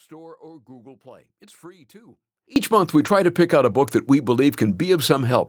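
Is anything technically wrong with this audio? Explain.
Yes. The speech is already gone when the clip opens and stays gone until 2.56 s. This is an audio dropout to a faint residue: the wanted signal was likely lost upstream while the path stayed live, leaving only a faint leak around 25 dB below normal. Its abrupt return, not a fade-in, separates it from a quiet pause.

Later there are two brief spots where lost packets were rebuilt from error correction, at 3.01 to 3.07 s (about 40 ms, which fits two 20 ms packets) and at 3.83 to 3.85 s (20 ms). The decoder played low-bitrate copies carried in following packets, so the sound turns momentarily rough and noisy with no silence, unlike a true dropout.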